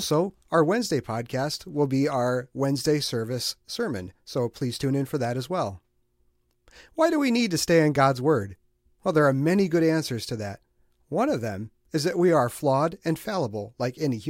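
Nothing in this recording jumps out as a technical problem; it's just speech, running along without any trouble worth flagging.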